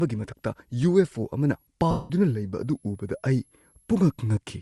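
A switching supply whistle runs through the whole of this speech recording: a thin, high tone wandering between about 10.9 and 12.3 kHz, sitting roughly 40 dB below the speech. A power converter slipping into an audible burst mode, or beating against a second supply, produces exactly this kind of tone, and its pitch shifts as the load it is feeding changes. Also present throughout is a breathy, grainy edge on the voice, with the upper spectrum thinned out and partly replaced by noise. This plainly audible coding damage is likely Bluetooth LC3 compression. The transform codec of LE Audio, working at a modest rate (the character fits something near 48 kbps with 7.5 ms frames), discards much of the high band and fills the gaps with shaped noise. Lost LE Audio frames then break the sound from 1.91 to 2.10 s, about 190 ms, which fits a run of roughly 25 frames of 7.5 ms. Across that gap the decoder keeps repeating the last good spectrum with scrambled phase. 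The speech therefore turns into a smeared, noisy wash that sags in level as the concealment fades out, until real frames arrive again.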